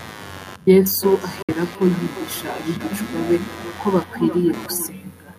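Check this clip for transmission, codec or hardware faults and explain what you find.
Three faults are present: computer activity noise under the whole clip, a feedback echo between two devices through most of it, and a short gap that points to a Bluetooth dropout.

Computer activity noise runs from start to end, a buzzing pulse at around 100 per second, roughly 20 dB below the speech. Processor or graphics load shifts the audio circuit's shared ground. A spectrogram shows a faint comb of harmonics independent of the speech.

Feedback echo between two devices appears from 0.84 s to 4.97 s. A second device in the room replays what the other device's microphone sent, and its sound is captured again. Each phrase returns about 400 ms later, thinner and ringing, peaking about 13 dB below the speech. The waveform shows delayed, decaying copies of each burst.

At 1.42 s to 1.49 s the sound cuts out for about 61 ms and then resumes further on, as if it had kept playing. 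The likely cause is a Bluetooth dropout, and the gap fits roughly three lost packets. It appears as a flat silent notch in the waveform and a blank vertical strip on a spectrogram.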